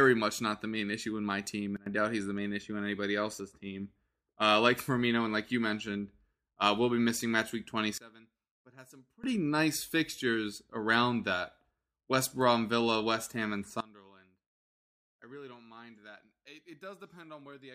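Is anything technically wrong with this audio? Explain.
Yes. The speech has three sudden gain jumps: the level drops by about 21 dB from 1.77 to 1.86 s, by about 24 dB from 7.98 to 9.24 s, and by about 23 dB from 13.80 s to the end. Each drop, and each of the two recoveries, is instantaneous, likely a gain change applied between two samples with no ramp. The background noise falls together with the speech, which rules out a fade or compressor, since those ease in.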